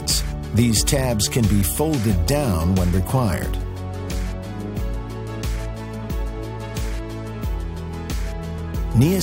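At 8.57 s the audio briefly lurches slightly forward. These are compressed frames skipped: about one frame, around 20 ms at a 23.2 ms frame length, never played.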